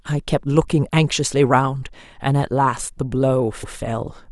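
A short stutter interrupts the speech at 3.62 to 3.76 s, where the same 139 ms of sound plays twice. These are repeated frames: a run of compressed frames, consistent with about six, was sent twice, lengthening the audio by 139 ms.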